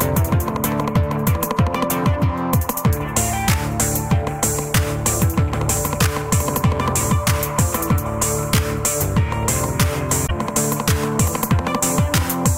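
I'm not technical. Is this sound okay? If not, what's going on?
No. At 10.23 to 10.31 s there's damaged data in a compressed stream: some stored bytes got corrupted, so the player stumbles and you hear a brief chirp or glitch.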